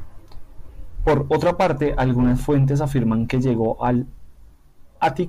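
No technical faults are audible anywhere in the speech.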